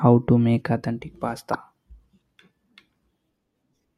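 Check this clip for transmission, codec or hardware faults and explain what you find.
There's one fault here, a spot of damaged data in the compressed stream, from about 1.50 to 1.55 s. For roughly 50 ms, some of the coded bytes in the speech are wrong, so the decoder either misreads those frames or throws them out, loses its sync and has to hunt for the next valid frame header before it can pick up again. What you hear is a short, harsh chirp or blip cutting briefly into the speech.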